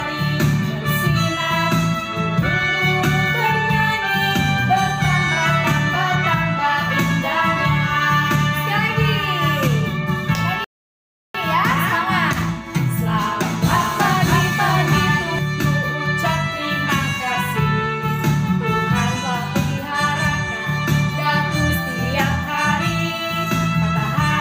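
The audio cuts to silence at 10.64 s and resumes at 11.35 s, a playback stall of about 0.70 s. The sound picks up again rather than fading back in, which points to a player that likely ran out of buffered data or had its output thread blocked. What separates this from a dropout or a muted edit is the length and cleanness of the gap: a full, abrupt silence in mid-flow, then continuation. From 13.63 s to 15.39 s a doubled audio track appears. A second full-band copy trails the original by roughly 0.7 s at about the same level, and it switches on and off sharply at those boundaries. Unlike an echo or reverb, the copy has no decay, no repeats and no room colouring, which suggests a second capture path or an edit leaving two out-of-step copies.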